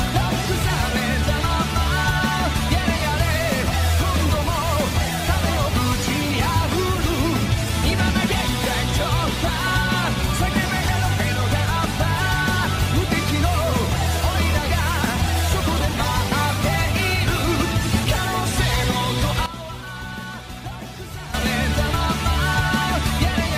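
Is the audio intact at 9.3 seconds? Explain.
Yes, at 9.3 seconds the audio is intact, with no dropout, click, distortion or other technical fault at that moment.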